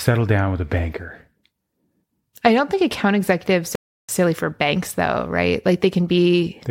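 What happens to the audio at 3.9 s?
A playback stall runs from 3.75 to 4.09 s, covering the moment at 3.9 s. The speech stops abruptly in mid-flow and the output falls completely silent for about 0.33 s before the sound picks up again. The likely cause is the player briefly running out of buffered data, or its playback thread being held up, so nothing reached the output until it recovered and resumed feeding audio.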